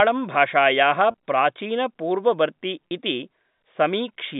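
At 1.11 to 1.14 s and again at 2.88 to 2.91 s there is packet loss with pitch repetition. Each 30 ms gap, consistent with a single dropped packet, is filled by repeating the last pitch period, which is heard as a brief held, buzzy tone.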